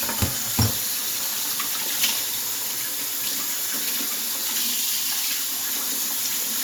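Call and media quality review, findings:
No audible defects found in the sound recording; no fault raised against any component.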